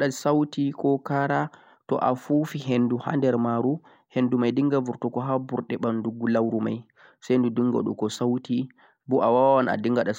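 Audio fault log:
No fault is heard in this speech clip.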